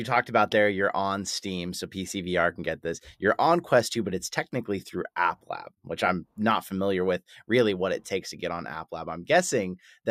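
Nothing in this bit of speech gives a listener any technical fault to point to, so there's nothing to flag here.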